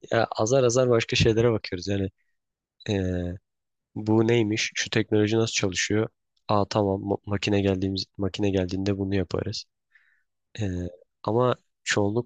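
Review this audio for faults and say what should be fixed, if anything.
Nothing stood out on listening to this speech recording, so there is nothing here that needs fixing.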